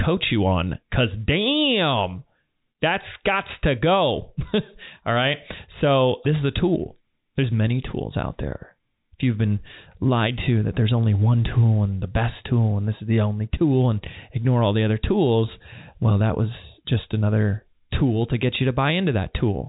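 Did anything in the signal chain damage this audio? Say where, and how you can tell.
No, nothing in the signal chain damaged this audio.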